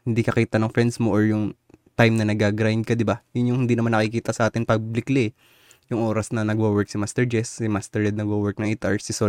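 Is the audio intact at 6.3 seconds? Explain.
Yes, the audio is intact at 6.3 seconds, with no fault at that moment.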